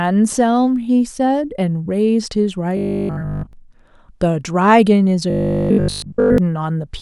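From 2.77 to 3.53 s, and again from 5.30 to 6.38 s, the speech collapses into robotic sound from repeated short buffers. A rigid, metallic 50 Hz buzz replaces nearly everything, likely from a 20 ms chunk looping while fresh audio was skipped. Unlike dropouts, there is no silence, only a fixed-pitch drone.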